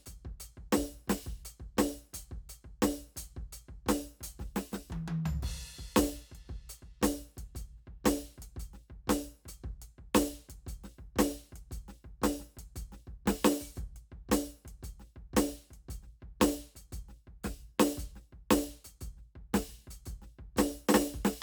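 No technical faults can be heard in this music.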